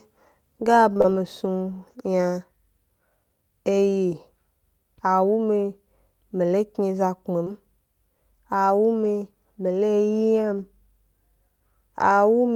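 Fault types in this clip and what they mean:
Short concealed packet loss: A brief smeared wobble near 0.93 to 1.10 s, where three 20 ms gaps fall back to back, and another brief smear at 7.45 s. Audio arrived too late, so the receiver extended the preceding sound to cover each hole, then blended back.
Lost packet rebuilt from error correction: Single 20 ms moments turn rougher and noisier, at 7.46 s, 9.04 s just before "mi lo", and 10.58 s. Each lost packet was replaced by the low-bitrate copy carried in the following packet.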